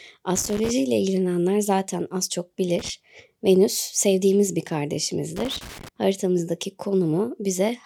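A worn or dirty contact in the signal chain is making and breaking intermittently in this speech clip, chopping the signal. The result is loose connector crackle, irregular bursts of scratching at 0.36–0.71 s, 2.79–2.89 s and 5.36–5.88 s.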